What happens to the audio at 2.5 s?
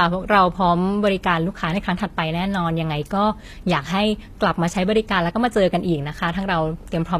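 At 2.5 s the speech carries the same damage heard across the whole clip: the treble is gritty and metallic, s sounds turn lispy, and nothing sits above 14.9 kHz. This is likely HE-AAC compression at a low bitrate, around 24 kbps, with the upper band rebuilt from copied lower harmonics.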